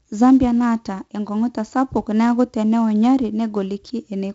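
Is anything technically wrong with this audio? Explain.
Yes. Throughout the speech there is heavy 4-bit ADPCM compression. Each sample is coded as a coarse 4-bit step from a prediction, so loud passages carry a gritty, level-following hiss, and fast attacks distort. Nothing reaches above 7.8 kHz, which fits a 16 kHz sample rate and dulls the top end.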